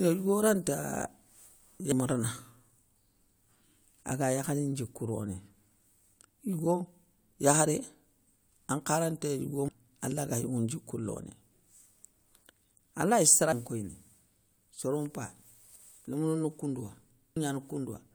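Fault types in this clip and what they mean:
Damaged data in a compressed stream: corrupted bytes make the decoder misread frames and resync on the next header. In this speech, five brief glitches land at 1.92, 6.19, 9.68, 13.52 and 17.36 s, each a discontinuity in the waveform.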